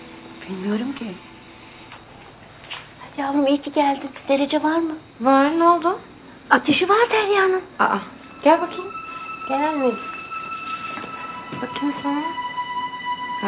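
Short concealed packet loss at 0.98 to 1.02 s: about 20 ms of audio arrived too late for the decoder, which extended the preceding sound for 16 ms before easing back. It is heard as a brief smear or wobble, with the band capped at 4 kHz, which fits a G.711 call path.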